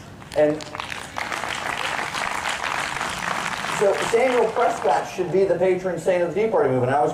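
No technical faults are audible.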